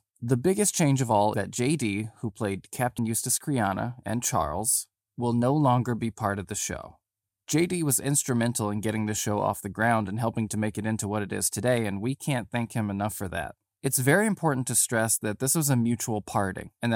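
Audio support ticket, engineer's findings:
Brief smeared blips with sound jumping ahead at 1.34 s (after "biggest change of all", about 150 ms lost), 2.98 s (after "who played") and 16.67 s. Compressed frames skipped in decoder; gaps span whole 26.1 ms frames.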